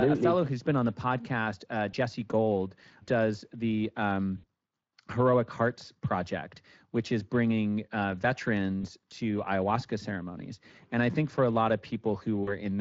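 The Speex codec runs throughout, with plainly audible damage at 20.6 kbps: a CELP coder short of excitation bits leaves the speech noisy and hoarse. VoIP packet loss concealed by the speech codec occurs at 1.91 to 1.95 s, just after "on the podcast uh"; at 4.37 to 4.45 s; at 8.81 to 8.86 s, just before "to ayahuasca ceremonies"; and at 12.43 to 12.53 s. The decoder fills 20, 60, 20 and 40 ms gaps by extending its last pitch and filter with falling gain, producing brief, fading smears.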